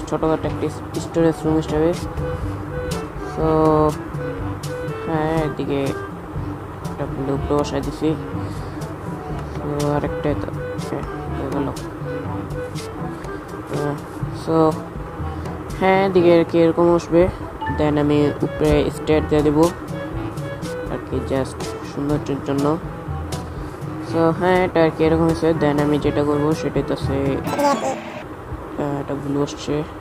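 Audio read two samples at a time (double speed) appears from 27.44 to 28.22 s. Here the playback treats each pair of samples as a single frame, as if the stream held two channels or samples twice as wide, so it moves through the material at 2.0 times normal rate. The sound jumps an octave higher and hurries along.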